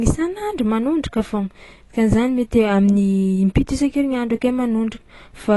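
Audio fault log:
Throughout, AAC compression. The speech sounds dull and smeared, with a plainly audible warbling, fizzy texture on sustained sounds and sibilants. Nothing remains above 11.5 kHz. The likely cause is AAC-LC coding at a low bitrate, fitting about 32 kbps, which coarsely quantises and drops spectral detail.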